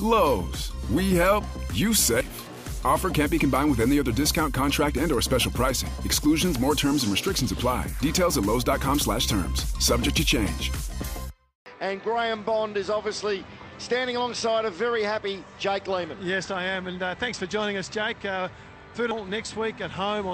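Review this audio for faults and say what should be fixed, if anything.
Compressed frames are skipped twice. At 2.21 s the audio jumps forward by about two frames, roughly a fifth of a second. At 19.11 s it jumps by about seven frames, close to 0.7 s. Each frame here spans 92.9 ms, so every jump is a whole multiple of that. Prevent this by validating the encoded file's integrity and re-encoding or re-transferring any frames that fail decoding.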